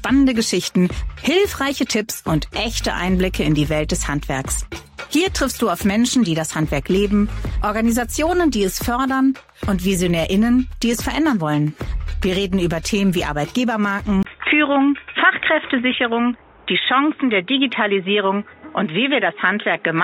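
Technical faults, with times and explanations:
14.23 to 20.03 s, input switched to a poorer device: after a 20 ms silence the sound turns dull and boxy, with nothing above 3.8 kHz and a faint new noise floor about 40 dB down, at much the same level. A narrower-band microphone or headset call profile likely took over.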